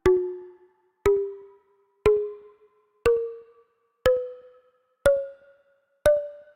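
No technical faults can be heard anywhere in the audio, and the signal stays intact and steady throughout.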